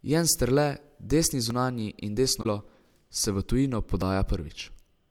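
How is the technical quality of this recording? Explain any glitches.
The recording has three audible glitches in the speech, of two kinds.

At 1.50 s and 4.02 s there is a brief jump where the sound skips forward by roughly 15 ms and 10 ms. This is likely a dropped buffer (overrun): samples were overwritten before being read, so the remaining audio is spliced directly together.

From 2.39 to 2.46 s a short glitch interrupts the sound. This comes from damaged data in the compressed stream, which makes the decoder misread frames and lose sync until it finds the next valid header.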